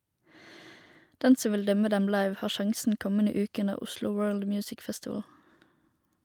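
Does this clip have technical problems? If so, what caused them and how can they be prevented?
No, nothing in this clip points to a technical fault. There is no cause to trace and nothing that needs preventing.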